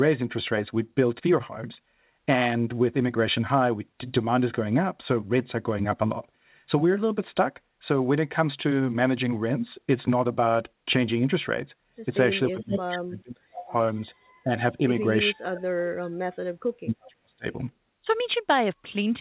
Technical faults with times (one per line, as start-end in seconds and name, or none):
12.43-12.81 echo leak
12.51-13.73 speech suppressed in double talk
14.44-14.49 speech suppressed in double talk
15.31-17.47 speech suppressed in double talk